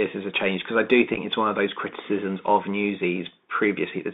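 From start to end, the speech passes through a Bluetooth CVSD headset codec at 64 kbps. It codes one bit per sample, stepping up or down with an adaptive step. The line spans 200 Hz to 3.7 kHz. Fast loud peaks outrun the step and distort. S sounds turn scratchy over a granular hiss.

At 1.14 to 1.18 s, just after "change because I do" and before "it's one of those", there is unconcealed Bluetooth headset packet loss. About 19 ms of audio drops out in short holes scattered over 30 ms, the longest 7.5 ms. That points to a handful of lost packets. The speech chops, then returns briefly quieter.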